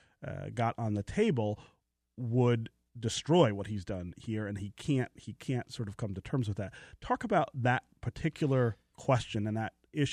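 At 1.53 to 1.56 s, compressed frames are skipped: about one 23.2 ms frame drops out, and the speech jumps ahead by about 20 ms.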